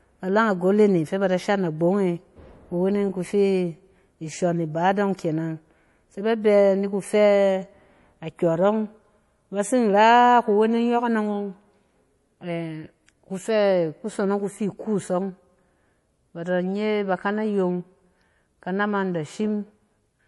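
From start to finish the speech has a watery, swirly quality, and there's nothing above about 11.5 kHz. That's likely MP3 compression squeezed to something like 48 kbps: short on bits, the encoder chops the treble and lets weaker detail flicker in and out.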